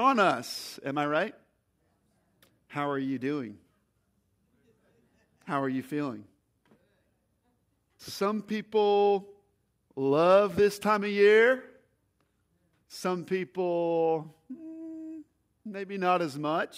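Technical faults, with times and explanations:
Nothing stood out as a technical problem on listening.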